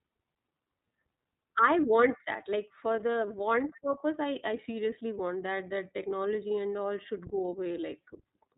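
The whole speech clip runs through the iLBC codec, and you can plainly hear it: everything above 4 kHz is gone, and the voice has that rough, slightly synthetic edge from each frame being coded on its own, which fits 30 ms frames at about 13.3 kbps.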